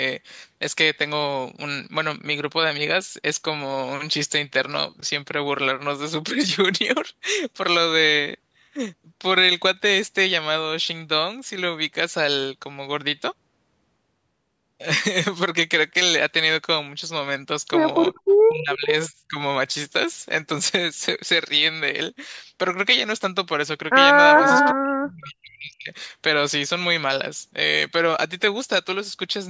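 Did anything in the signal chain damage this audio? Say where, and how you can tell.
Yes, in the call processing stage. The speech is repeatedly pulled down at 18.2, 18.48–18.88, 19.08–19.39 and 24.73–25.91 s, dropping by as much as 40 dB. This is likely speech suppressed in double talk: with both ends active, the echo canceller attenuated the near talker along with the echo.

The same stage also produced an echo leak. A delayed copy of the speech, 427 ms behind, sits roughly 10 dB down at 18.7–18.95 s, and another, 434 ms behind and only about 5 dB down, appears at 24.37–24.74 s. The likely cause is a loudspeaker's output passing the canceller and returning.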